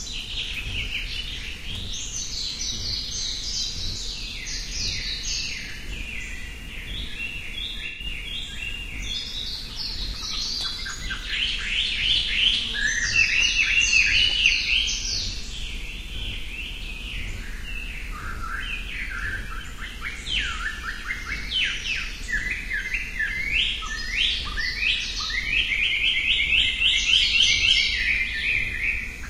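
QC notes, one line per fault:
7.86–8.05 s, AAC frame loss with concealment: for roughly 190 ms the sound turns smeared and noisy. The decoder lost a stretch of data, about 128 ms, which fits three consecutive AAC frames, and rebuilt the gap by reusing the last good spectrum with randomised phase. On a spectrogram this shows as a frozen, blurred block where detail stops changing. The waveform loses its transients and fine shape.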